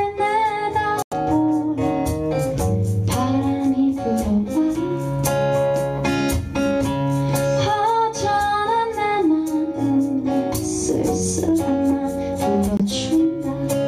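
The audio cuts to silence twice, from 1.02 to 1.14 s and from 12.77 to 12.81 s, then resumes further along as if it had kept playing. This is likely a Bluetooth dropout: late packets were discarded, costing about 93 ms and 23 ms of sound.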